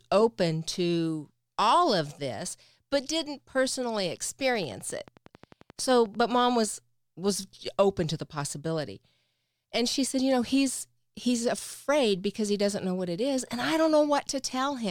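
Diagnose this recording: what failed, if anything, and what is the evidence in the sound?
A steady ticking rides over the speech from 4.55 s to 6.16 s, starting just after "this but didn't personally" and stopping before "mom was was open". It's a train of clicks at about 11.3 per second, evenly spaced, around twenty in all, each peaking about as loud as the speech itself. Similar, regularly paced pulses like this are likely interference coupled into the analogue wiring from nearby equipment, or a faulty connection or power supply.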